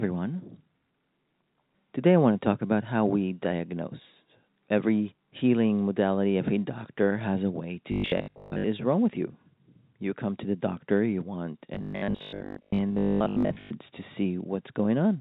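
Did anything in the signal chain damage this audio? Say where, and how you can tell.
Yes, robotic sound from repeated short buffers at 7.92–8.68 s and 11.75–13.73 s, likely a starved buffer looping 20 ms chunks, which imposes a rigid, metallic 50 Hz buzz.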